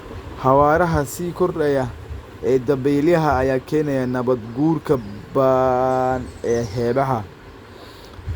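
No dropouts, distortion, noise bursts or level jumps are audible anywhere in the speech, so there's nothing to flag.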